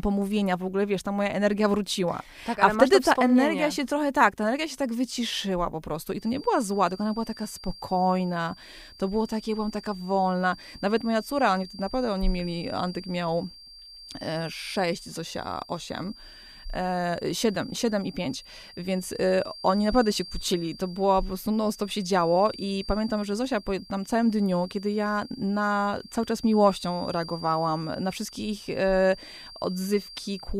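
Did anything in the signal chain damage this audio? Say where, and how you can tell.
Yes. The likely culprit is an acoustic loop between playback and capture: a loudspeaker feeds back into the microphone with loop gain just under the point of runaway, so a single resonance rings on indefinitely. The result is a feedback whistle, a thin, steady tone near 4.7 kHz that enters at 6.12 s and persists to the end of the clip. It sits roughly 20 dB beneath the speech and swells and fades slowly in level without ever building up.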